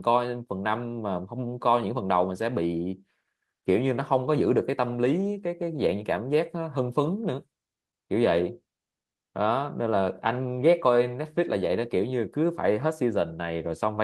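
No technical faults can be heard anywhere in this speech, so there are none to describe in time order.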